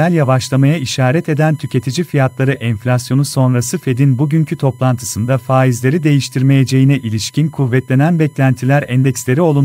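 Speech, with USB whine throughout: a fixed 1 kHz tone about 35 dB under the speech, from 1 ms USB frames leaking through power or ground, showing as one unbroken horizontal line on the spectrogram.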